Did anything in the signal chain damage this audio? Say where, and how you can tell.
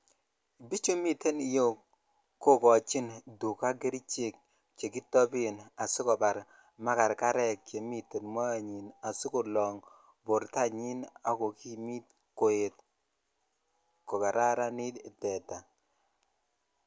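No, nothing in the signal chain audibly damaged this speech recording; the signal shows no sign of degradation at any stage.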